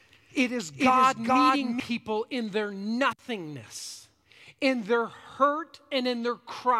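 Doubled audio track from the start of this speech clip to 1.8 s, stopping abruptly before "in their nothingness in": an equally loud copy trails roughly 0.4 s behind, likely from a slower second capture path.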